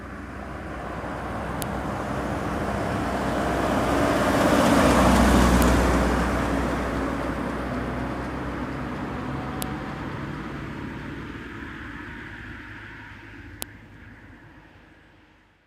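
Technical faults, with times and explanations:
1.62, 5.62, 9.62 and 13.62 s: file header played as audio. Each of these moments carries a sharp, loud click or snap that cuts through the surrounding sound regardless of what it is doing, recurring every 4 s like clockwork. The regular spacing points to the audio being assembled from 4-second WAV pieces whose headers were left in place, so a few dozen bytes of file metadata get played as raw samples at every join.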